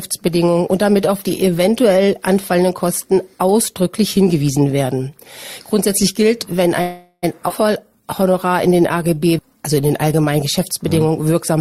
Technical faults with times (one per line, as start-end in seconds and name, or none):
6.81-7.25 call audio freeze
7.49-7.52 skip ahead
7.84-10.21 jitter buffer slow-down